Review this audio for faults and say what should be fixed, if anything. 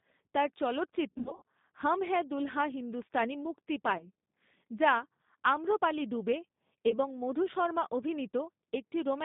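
G.729 codec, throughout the clip: the speech has been rebuilt by a low-rate vocal-tract model that places only a few pulses per short frame, so it sounds rough and slightly synthetic. The band runs from about 150 Hz to 3.7 kHz with nothing above, and the plainly audible damage fits G.729A at 8 kbit/s. To prevent this, carry the call on a wideband codec such as G.722 or Opus instead of G.729.

VoIP packet loss concealed by the speech codec, at 1.10 to 1.42 s, 3.98 to 4.07 s and 6.89 to 6.93 s: when packets went missing, the decoder kept extending its last pitch and filter at falling gain, so the speech is stretched into a buzzy tone or coloured noise that fades, then takes a moment to recover. The first stretch is worst, with about 200 ms lost in scattered gaps over 320 ms, the longest 80 ms. The two later events each drop about 20 ms. To prevent this, fix the network loss with QoS prioritisation or a better link, and add forward error correction or redundancy.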